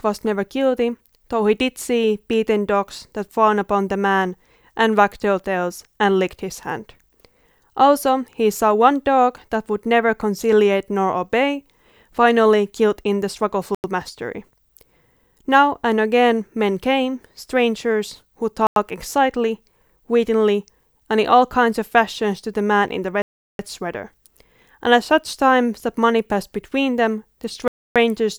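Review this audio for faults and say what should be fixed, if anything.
Four blocks of digital silence cut this speech dead and back at 13.75 to 13.84 s, 18.67 to 18.76 s, 23.22 to 23.59 s and 27.68 to 27.96 s. Those are 93 ms, 93 ms, 370 ms and 280 ms. The 93 ms holes fit one 4096-sample buffer missed, and the longer ones fit several in a row. To prevent it, give the audio thread a larger buffer or more scheduling priority so it never misses its deadline.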